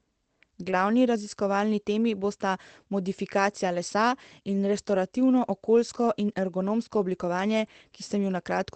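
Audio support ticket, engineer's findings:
Lost packet rebuilt from error correction, 0.67–0.73 s, just before "raziskovalni temi bosta modifikacija": about 40 ms turns rougher and noisier with no gap or buzzy extrapolation, which fits two lost packets replayed from Opus in-band low-bitrate copies.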